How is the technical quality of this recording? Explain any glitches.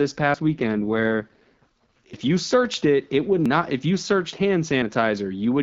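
The speech is carried over a wideband mobile link, clear at first and consistent with AMR-WB at about 12.65 kbit/s, but it is interrupted by three skips and a stretch of degraded quality.

From 0.48 to 2.24 s, ending just before "you searched it it", the speech turns rougher, buzzier and more synthetic, with no gap and no loss of bandwidth. This is an AMR rate drop. The sound fits a fall from 12.65 to 6.6 kbit/s: a weak radio link pushes the codec to a lower rate so that more bits can go to error protection. Fewer bits describe the voice, so it sounds coarser until the rate recovers.

At 0.34, 2.13 and 3.46 s the sound jumps abruptly, and there is no silence at the join. The 2.13 s skip comes just before "you searched it it", and the 3.46 s skip falls between "searched it it would" and "if you searched". These are most likely dropped buffers (overrun): audio was overwritten before the software read it, so a piece vanished and its two sides were spliced. 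Roughly 40 ms is lost at 0.34 and 3.46 s, and about a tenth of a second at 2.13 s.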